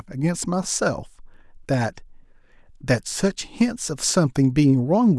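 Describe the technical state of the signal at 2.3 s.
At 2.3 s the speech signal is intact, with no audible dropout, distortion, glitch or other fault at that moment.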